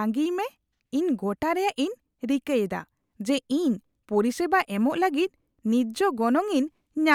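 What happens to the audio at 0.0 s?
Nothing goes wrong at 0.0 s; the speech begins cleanly, with no fault at that moment.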